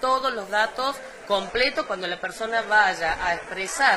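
From 1.38 s to the end, an adaptive stream at a lower bitrate: the stream switched down without a gap, and treble above 11.8 kHz vanishes, consistent with a 16 kbit/s HE-AAC fallback.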